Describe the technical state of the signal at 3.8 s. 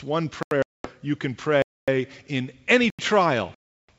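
At 3.8 s the sound is inside a packet loss on an ADPCM call. A hard-edged silent hole runs from 3.55 to 3.91 s, about 340 ms, or around fifteen packets. The G.722 decoder's predictor and step size drift from the sender's, so the sound resumes unsettled.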